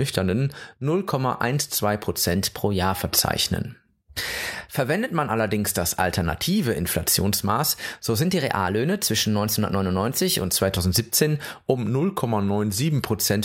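Drift correction steps at 2.36–2.94 s and 8.25–10.39 s speed the speech up about 6.3%, raising pitch roughly a semitone (105 cents), then snap back; at 11.78–13.10 s it slows 6.3% and drops 112 cents. Likely clock-matching software changing playback rate abruptly.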